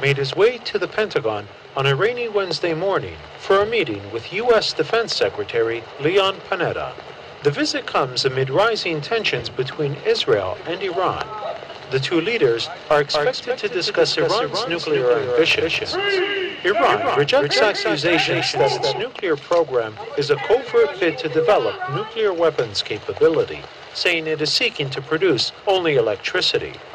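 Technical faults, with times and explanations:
13.08–19.02 s, doubled audio track: a second, full-band copy of the sound sits roughly a fifth of a second behind the original, a few dB quieter, so everything gets a hard slapback with no decay or room colour. It switches in and out abruptly at both ends. That's most likely the same signal captured twice, through a slower path, or two copies left out of step in an edit.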